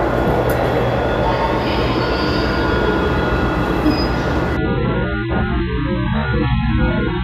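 From 4.57 s to the end, the sound abruptly turns dull and smeared, with nothing above 4.2 kHz and obvious codec artefacts, yet no gap. This is an adaptive stream at a lower bitrate, switching mid-play to a far leaner AAC version as the connection slowed.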